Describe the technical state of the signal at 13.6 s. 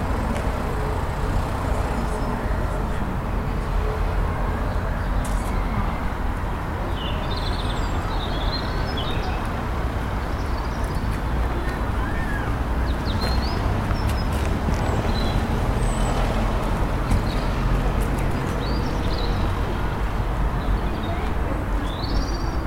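Nothing is wrong with the signal at 13.6 s, and the audio is intact there.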